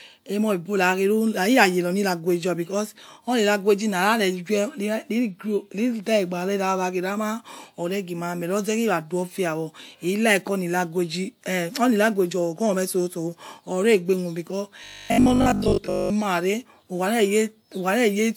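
From 14.84 to 16.10 s the speech becomes robotic sound from repeated short buffers, a rigid metallic 50 Hz buzz, likely from a 20 ms block replayed while most real audio is skipped. Spectrograms show even 50 Hz harmonic stripes; the waveform repeats across about 70% of the span.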